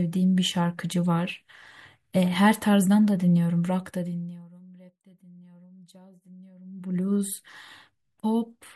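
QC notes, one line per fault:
Nothing to flag here; the speech runs without any technical faults.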